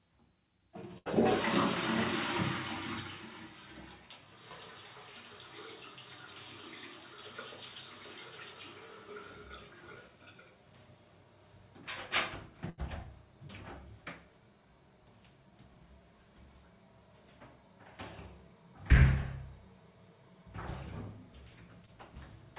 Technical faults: burst of packet loss; short concealed packet loss

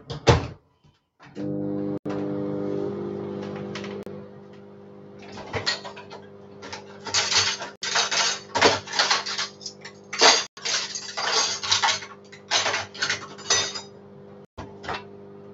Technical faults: noise suppressor applied to music or sounds; sound cut by the noise suppressor; Bluetooth stall

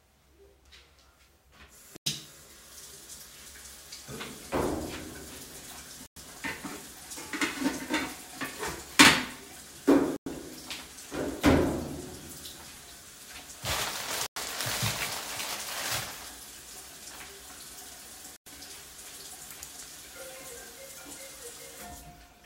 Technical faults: gap between chunks

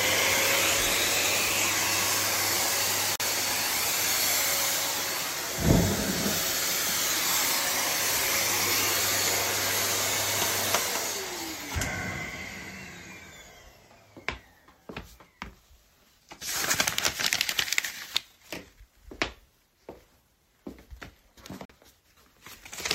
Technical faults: Bluetooth dropout

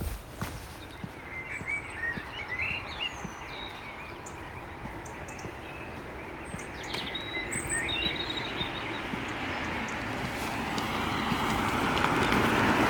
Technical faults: none

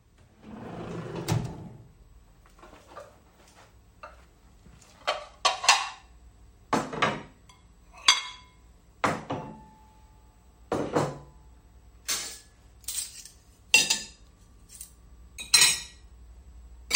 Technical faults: none

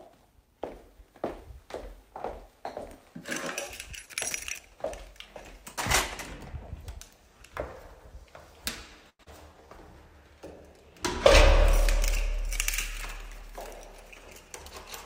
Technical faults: short stall from a late packet; skip ahead; jitter buffer slow-down; jitter buffer speed-up

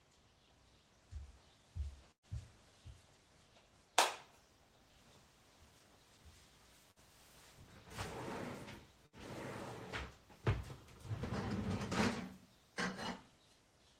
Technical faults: burst of packet loss

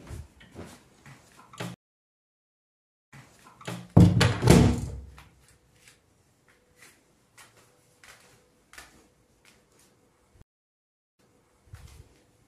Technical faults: stream reconnect

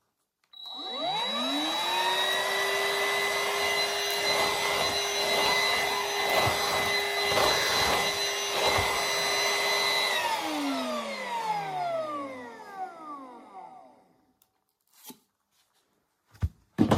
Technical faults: none

